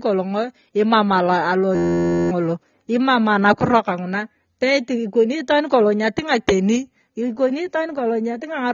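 It's a short speech clip, and the whole thing sounds dull and smeared, with a fizzy, warbly edge on the sibilants. That's plainly audible codec damage, likely AAC compression at a low bitrate around 24 kbps, where the top end gets cut and the high bands get patchy. From 1.75 to 2.31 s there's a system hang loop: one 11.61 ms slice repeats dozens of times, giving a steady buzz at about 86.1 Hz, which fits a 512-sample buffer cycling while the system froze. Roughly half a second of real audio is lost there.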